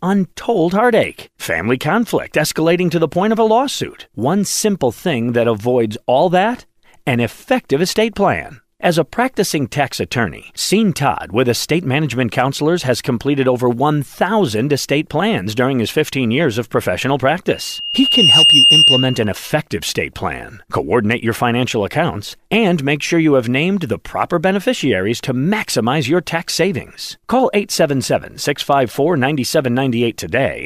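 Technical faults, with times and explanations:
17.50–19.37 s, loudspeaker feedback squeal: the microphone re-captures its own loudspeaker, letting a 2.8 kHz tone build over roughly 0.7 s into a piercing squeal well above the speech.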